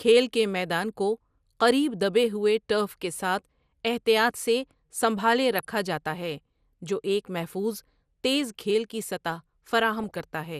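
Starved MP2 coding is the likely cause of the damage throughout this speech recording. MPEG Layer II has too few bits to spread across its sub-bands, so upper bands drop out and the rest are quantised coarsely. The result is a dull top end with a plainly audible gurgling, granular edge, which fits a rate of around 80 kbps. DAB burbling is also present: reception errors, at a rate of a fraction of a percent, slip past error correction into the MP2 data. Corrupted samples put short blips of noise in single sub-bands, and corrupted scale factors make sub-bands jump in level for up to a frame. Three bursts of burbling result, at 2.88–3.05 s between "کو قریب دبے ہوئے" and "ساتھ احتیاط سے سنبھالے", at 5.58–5.65 s just after "ساتھ احتیاط سے سنبھالے", and the longest at 10.0–10.2 s.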